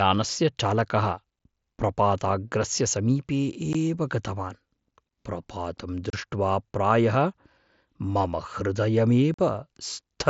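At 3.73 s after "प्रपाताग्रस्य समीपे", then at 6.10–6.13 s and 9.34–9.39 s, unconcealed Bluetooth headset packet loss leaves abrupt 15, 30 and 45 ms gaps.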